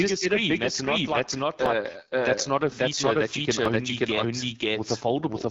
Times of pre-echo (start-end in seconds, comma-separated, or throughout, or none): none